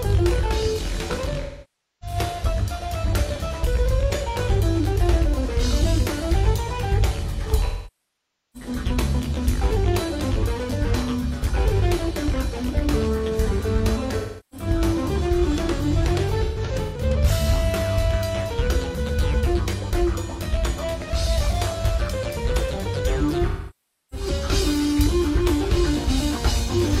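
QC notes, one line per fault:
1.41–2.16 s, 7.65–8.69 s, 14.17–14.67 s, 16.43–17.01 s, 23.48–24.27 s, 26.63–26.70 s: AAC frame loss with concealment. Smeared, noisy, phasey patches that sag toward silence in the longest gaps, near 0.9 s at 7.65 s. The decoder rebuilds missing frames from the last good spectrum with scrambled phase, fading it as the loss continues.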